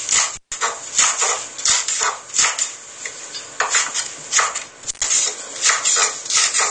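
Everyday sounds, dull and smeared throughout, with a warbling, fizzy texture and nothing above 9.7 kHz. That points to lossy coding, likely AAC compression at a low bitrate, around 32 kbps. The encoder lowers its cut-off and quantises coarsely, so the damage is plainly audible. Intermittent contact cuts the sound twice, from 0.35 to 0.52 s and from 4.84 to 5.08 s. A loose plug or cable opens briefly, for about 145 ms and then 112 ms. Crackle marks each edge, and faint hiss remains while the line is open.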